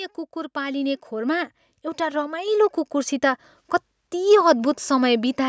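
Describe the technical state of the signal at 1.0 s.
At 1.0 s the speech is inside an automatic gain rising that runs from 0.33 to 3.55 s. The gain control judged the input too quiet and kept lifting its level, by about 11 dB overall, so voice and background swell together. Unlike fast pumping, this climb is slow and steady over three seconds.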